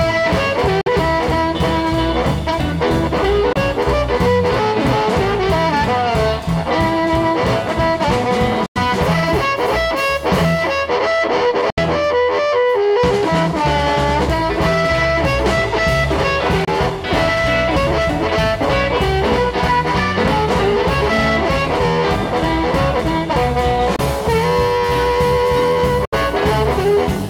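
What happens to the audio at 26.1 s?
Audio packets likely failed to reach the headphones in time and were discarded, a Bluetooth dropout from 26.05 to 26.14 s. The output cuts to silence, then resumes further along as if it had kept playing, skipping about 70 ms, which fits three dropped frames.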